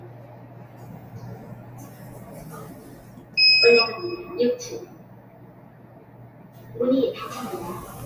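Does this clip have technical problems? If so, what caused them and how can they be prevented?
Yes. A noise suppressor applied to music or sounds runs through the whole clip. Built for speech, it treats sustained tones, ambience and decaying tails as noise and pulls them down by something like 15 dB, while sharp onsets slip through, so the sound pumps and thins between attacks. Unlike compressor pumping, the dips follow steadiness rather than loudness, and the level sinks smoothly instead of cutting out like a dropout. Disable speech noise suppression for any non-speech material.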